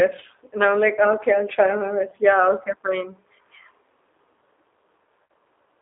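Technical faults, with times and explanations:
throughout: G.729 codec. The speech is confined to about 300 Hz to 3.7 kHz, with nothing above. It sounds rough and slightly synthetic, plainly so. That fits G.729A at 8 kbit/s, which rebuilds each frame from a filter, pitch predictor and a few pulses.
2.10–2.14 s and 5.24–5.30 s: VoIP packet loss concealed by the speech codec. Just after "okay I'll try my", about 20 ms goes missing. Near the end, about 60 ms does. The decoder stretches the last sound into a fading buzzy tone or coloured noise, and the audio stays weak briefly afterwards, fitting one and then three lost packets.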